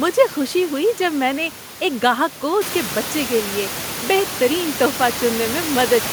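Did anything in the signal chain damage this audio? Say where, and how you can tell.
No, nothing in the signal chain damaged this speech.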